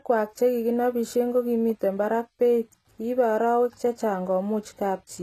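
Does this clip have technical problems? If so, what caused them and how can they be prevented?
Yes. Across the whole speech clip there's a hard ceiling at about 14.9 kHz, with nothing above it, and the artefacts of a heavily squeezed codec. That points to low-bitrate audio saved at a high bitrate: the likely cause is a lean encode, something like 20 kbit/s HE-AAC, re-saved as a 320 kbit/s MP3, which can't restore what the first pass discarded. To prevent it, always re-encode from the original uncompressed source rather than from a compressed copy.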